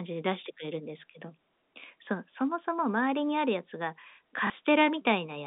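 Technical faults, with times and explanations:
4.47 to 4.50 s, packet loss with last packet repeated: a 30 ms gap, which fits a single lost packet, gets filled by replaying the previous chunk. The single repeat comes through as a small blip in the telephone-band audio.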